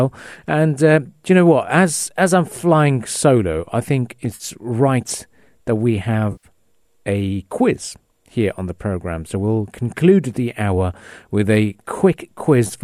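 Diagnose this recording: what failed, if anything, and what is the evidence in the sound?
Network stage: AAC frame loss with concealment. Smeared, noisy patches at 4.35–4.44 s and 6.32–6.47 s, where the decoder refilled the missing frames from the last good spectrum.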